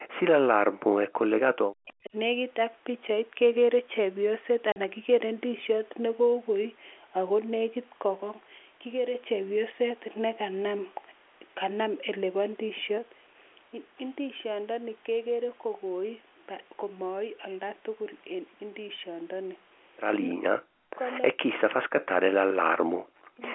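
From 0.07 to 1.23 s and again from 1.55 to 2.15 s, the speech sinks by as much as roughly 40 dB, thinning and breaking into fragments. This is speech suppressed in double talk, likely caused by an echo canceller that could not tell the near talker from loudspeaker echo and turned everything down. On a waveform the envelope collapses to a thin trace, and a spectrogram shows the upper harmonics vanishing.

At 4.72 s there is a 40 ms hole, which fits two lost 20 ms packets. This is packet loss filled with silence. The gap has abrupt edges, showing as a flat-line notch in the waveform and a clean vertical blank column with thin broadband edge lines on a spectrogram.

The same double-talk suppression returns at 20.32 to 21.0 s, 21.33 to 21.56 s, and 21.72 to 23.42 s, with similarly deep dips that leave ragged, hollowed-out stretches.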